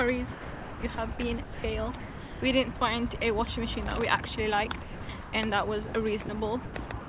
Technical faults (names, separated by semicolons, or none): sound chopped by the voice detector; sound dropped by the voice detector; processor overload crackle